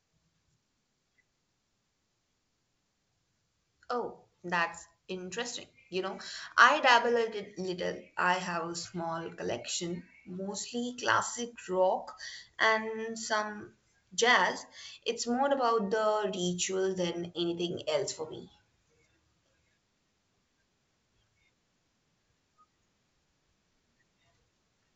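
The speech carries no technical faults; it has passed through G.722 wideband telephone coding, with the band reaching up to about 7 kHz and only a faint coding hiss in the upper range, which fits the codec's full 64 kbit/s mode.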